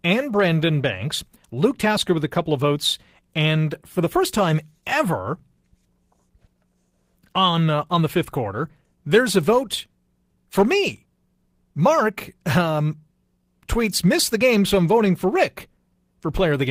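No technical faults are audible.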